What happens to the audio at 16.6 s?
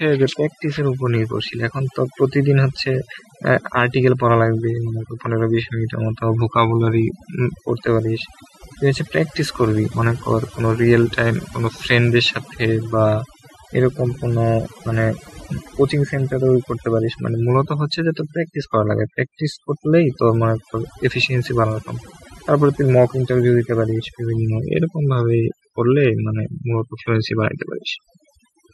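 At 16.6 s the background is pulled down and breaks up into twinkling specks. This is overdone noise removal, present through the whole clip: the noise reduction was set too strong, switching off frequency bands near its noise estimate and taking quiet parts of the voice with them.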